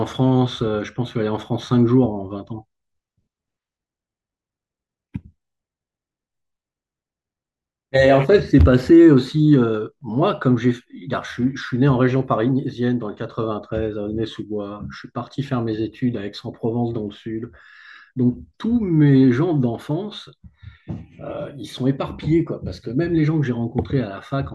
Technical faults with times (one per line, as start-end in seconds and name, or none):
none